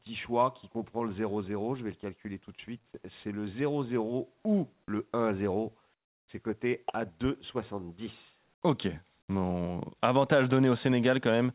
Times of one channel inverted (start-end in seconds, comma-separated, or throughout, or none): none